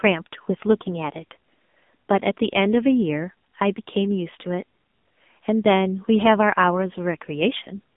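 Throughout the clip, the speech carries AMR narrowband mobile codec damage. Only about 200 Hz to 3.6 kHz survives, with nothing above 3.7 kHz. The low bitrate, which fits AMR-NB at 6.7 kbps, models the voice coarsely. It sounds heavily buzzy, thin and synthetic.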